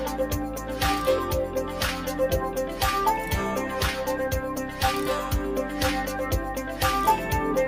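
A noise suppressor applied to music or sounds runs throughout: held tones and tails read as noise and sink by a few decibels, so the sound pumps and thins.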